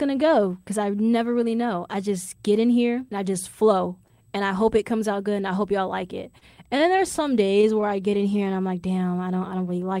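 A faint, steady high-pitched whine runs under the whole recording, pitched at 8 kHz with its strongest component at 16 kHz, roughly 45 dB below the speech. This is USB whine: current drawn in 125-microsecond bus microframes leaks into the audio through power or ground.

Right after "hope y'all like it", from 6.31 to 7.86 s, the speech catches and drags in eight brief holds, the longest 33 ms, about 121 ms in total. These repeated stalls (stutter) come from late packets repeatedly emptying the jitter buffer. The receiver stretched the last sound each time, so nothing is lost.

From 7.96 to 8.68 s, just before "like damn", the speech slows to 89% speed at unchanged pitch and sounds slightly drawn out, gaining 86 ms. This is a jitter buffer slow-down: the receiver repeated single pitch periods to rebuild its reserve.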